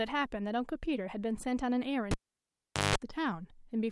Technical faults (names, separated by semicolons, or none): cable pulled and plugged in